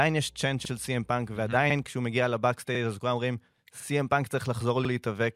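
A ground loop or nearby transformer couples the 60 Hz power line into the signal from the start until 1.87 s. This mains hum sits as a steady low tone under the speech, roughly 30 dB below it, and then stops.

The audio was processed in 1 s chunks, and each new chunk begins 50 ms before the previous one finished. These overlapping chunks replay that 50 ms at every join, at 0.65, 1.70, 2.75, 3.80 and 4.85 s, heard as a regular stutter or click in the speech.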